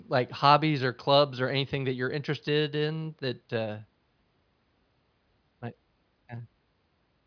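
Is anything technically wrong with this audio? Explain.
No, nothing technically wrong can be heard anywhere in this speech recording.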